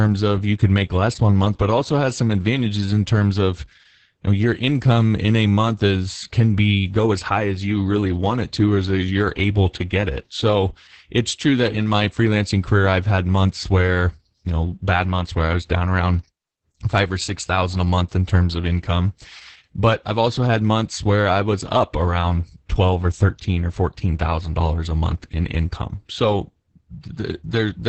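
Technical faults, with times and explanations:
Throughout, Opus voice compression: heavy SILK coding at 10 kbps cuts everything above about 8.6 kHz and roughens the excitation, so speech sounds muffled, hoarse and a bit robotic.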